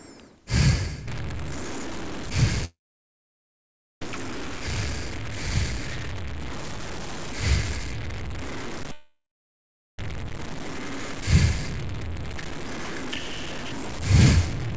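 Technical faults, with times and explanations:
1.08–14.77 s, stuck bit: A single data bit likely stuck at a fixed value in the converter or a data line shifts about half the samples by that bit's weight. This distorts the sound and fills quiet stretches with noise.
2.65–4.02 s and 8.92–9.99 s, long network dropout: Audio likely stopped arriving from the network for about 1.37 s and then 1.06 s, so those stretches are lost. Each time the receiver briefly extends the last sound as a fading buzz or hiss before going silent. The audio then resumes later in the sound, skipping past what went missing.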